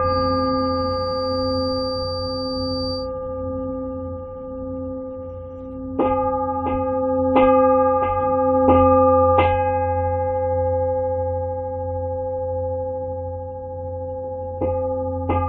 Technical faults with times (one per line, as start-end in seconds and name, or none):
0.00-3.10 feedback whistle